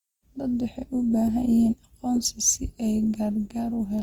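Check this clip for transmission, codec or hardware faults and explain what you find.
One codec fault runs through the whole clip: Opus compression, likely from a low-rate encode in Opus's music-style CELT mode, with plainly audible damage. At a rate consistent with about 24 kbps, the encoder preserves each band's overall energy but has too few bits for fine detail. It fills the gaps with folded copies of lower bands or with noise. The speech sounds grainy, rough and noisy rather than swirly, while the bandwidth stays full, reaching about 20.2 kHz.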